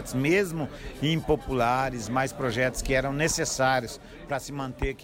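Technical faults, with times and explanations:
3.97 s to 5.04 s, sudden gain jump: at 3.97 s the level drops by about 6 dB from one sample to the next and stays down through the end. The sound and the background noise fall together, so it's the whole signal getting scaled rather than anything in the source changing. There's no fade, which likely means a gain setting or a one-bit shift was applied straight away without a ramp; a 6 dB drop is exactly what halving the samples gives you.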